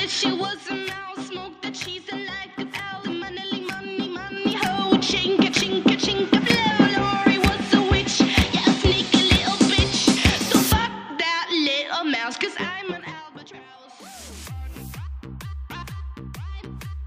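The gain control jumps in 2 dB increments with no smoothing between them, causing zipper noise. From 4.27 to 4.74 s the level climbs about 10 dB, and from 12.45 to 13.56 s it drops about 20 dB, at roughly ten steps a second both times. Each jump puts a small click into the waveform, so a fine ticking, zipping texture rides on the audio only while the level is moving.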